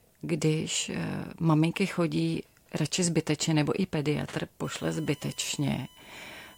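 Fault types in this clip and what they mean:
USB whine: a steady, fixed-pitch tone enters just after "zbytečně nebo i pediatr" at 4.64 s and runs to the end of the clip at 6.58 s. It sits on a 1 kHz fundamental, with its strongest component at 3 kHz, the third harmonic, and lies roughly 25 dB below the speech. The 1 kHz spacing matches the 1 ms USB frame rate, where bus current pulses couple into the audio path through shared power or ground.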